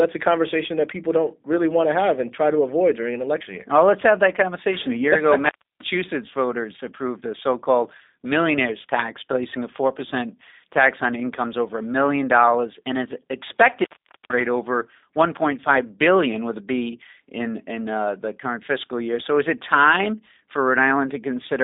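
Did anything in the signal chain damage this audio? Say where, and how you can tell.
Yes. Throughout, the speech sounds rough and slightly synthetic, confined to 250 Hz to 3.7 kHz. This is G.729 codec damage, fitting an 8 kbit/s G.729A stream rebuilding speech from a filter and pulses.

From 5.45 to 5.84 s the sound drops out for 0.31 s, crackling at its edges. This is an intermittent contact: a loose plug or cable in the analogue wiring briefly opened.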